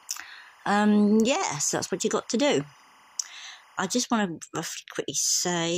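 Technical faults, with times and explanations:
0.00 to 4.05 s, timecode bleed: there's a chirpy warble sitting roughly 30 dB under the sound, flipping between around 1 and 2 kHz. That's linear timecode leaking in from a nearby track or cable, and its steady cadence fits 25 fps code.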